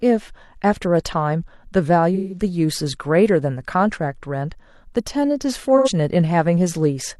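Speech with AAC frame loss with concealment at 2.14–2.43 s and 5.77–5.89 s. The decoder fills each gap from the last good spectrum, so the sound turns smeared and noisy. On a spectrogram these stretches show as blurred, static bands instead of moving harmonics.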